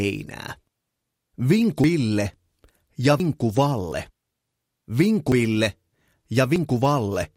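At 1.84, 3.2, 3.92, 5.32 and 6.56 s the sound jumps abruptly, without any gap. The likely cause is a dropped buffer (overrun), where samples were overwritten before being read and the two sides were spliced together. Roughly a tenth of a second vanishes at the first two jumps and less at the others. A waveform shows a sudden discontinuity at each point. A spectrogram shows a thin vertical broadband line with mismatched content on either side.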